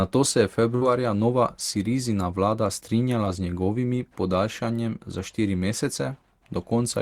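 A burst of packet loss at 0.75 to 0.83 s, just after "se je", is bridged by about 57 ms of the last sound stretched and faded, before the speech resumes with roughly 60 ms gone. Short concealed packet loss at 3.25 to 3.28 s, just before "z njegovimi podaljšanjem za", leaves a brief smear where 9 ms of synthesized sound covers a 20 ms hole.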